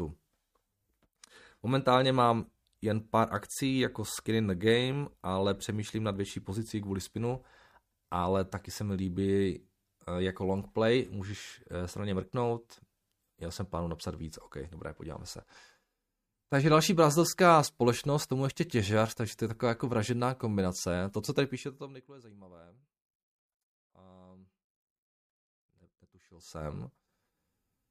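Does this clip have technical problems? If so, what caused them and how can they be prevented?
No, the speech shows no technical faults, so nothing needs preventing.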